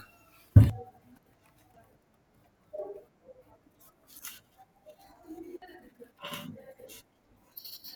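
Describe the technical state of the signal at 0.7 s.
At 0.70 s there is a dropped buffer (overrun): the software likely failed to read its samples before the hardware overwrote them, so about 150 ms of speech is missing. The two sides butt together, heard as an abrupt jump forward with no gap.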